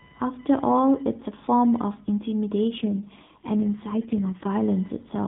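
All the way through the speech there's computer activity noise, a faint buzzy chirping pulsing at roughly 1 kHz and sitting around 30 dB below the voice. It comes from processor or graphics load disturbing the audio circuit's shared ground, so it tracks the machine, not the talker.

From 2.76 s to 4.47 s there's an AMR rate drop. The narrowband mobile link is still band-limited at 4 kHz, but the voice turns rougher and more synthetic, which points to the codec stepping down from about 12.2 to 4.75 kbps to protect a weak radio link.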